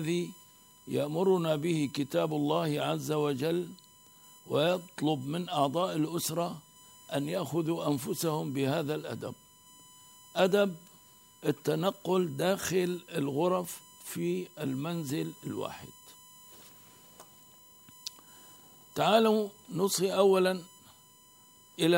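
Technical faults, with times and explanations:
Throughout: USB whine, a steady fixed-pitch tone at 1 kHz sitting roughly 30 dB below the sound, from the bus drawing current in 1 ms frames and leaking that rhythm through power or ground. On a spectrogram it shows as a thin, unbroken horizontal line at 1 kHz.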